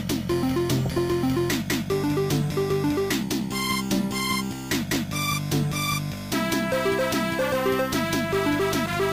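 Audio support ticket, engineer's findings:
DAB burbling, 0.86–0.98 s and 4.72–4.96 s. Short noise blips in single sub-bands over the programme; the second burst is longer, 14 frames. Probable component: DAB receiver/MP2 decoder, weak reception. Residual bit errors (about 0.3 percent) get past error correction; corrupted samples put short noise blips in single sub-bands, and corrupted scale factors make sub-bands jump in level for up to a frame. Differs from dropouts: no gaps or mutes, just garbled band-limited blips, and short bursts rather than steady codec swirl.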